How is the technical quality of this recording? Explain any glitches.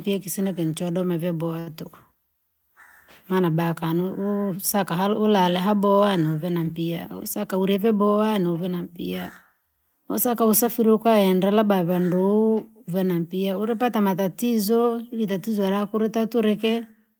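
Two network-related glitches affect the speech, both from the receiver's jitter buffer.

From 1.59 to 1.74 s there is a short stall from a late packet. A packet missed its playout time, the buffer ran dry, and the receiver stretched the last sound by 72 ms until the packet arrived. No audio is lost, but that sound is held too long.

From 6.92 to 7.99 s a jitter buffer speed-up plays the speech at 107% speed with unchanged pitch. The buffer had built up excess delay, so the receiver trimmed short pitch-period segments, around 70 ms in total, making the speech sound hurried.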